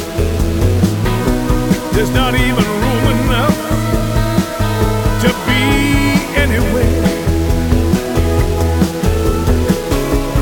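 Throughout, grainy distortion tracks the signal, pointing to likely low bit depth without dither, about 5 bits rounded. The waveform shows stair-steps, and the spectrogram shows noise about 20 dB below.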